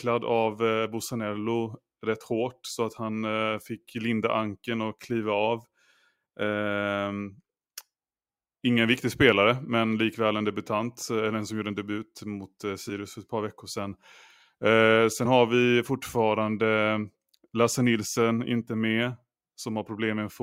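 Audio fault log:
12.89 s, compressed frames skipped: roughly one 20 ms frame never reached playback, so after "en debut mot eh" the speech jumps ahead into "för ett par veckor".
15.25 s, compressed frames skipped: about two frames, some 40 ms of audio, were not played, so speech lurches forward into "har vi fortfarande".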